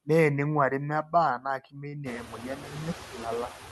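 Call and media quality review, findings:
Noise suppressor artifacts, whole clip: background pulled down by about 7 dB, pumping between and under phrases. Per-frame band gating in the suppressor, plus the room noise that swells around 2.0 s.

Speech cut by the noise suppressor, 1.03–1.13 s (dips about 13 dB) and 1.38–2.06 s (up to about 20 dB, roughly 0.4 s affected): speech goes faint and swallowed. The suppressor took low-level speech for noise and ducked it with the background.

Short stall from a late packet, 1.89–1.96 s: a sound held about 41 ms too long, nothing lost. Jitter buffer ran dry, and concealment stretched the last frame until the packet arrived, adding about 41 ms of delay.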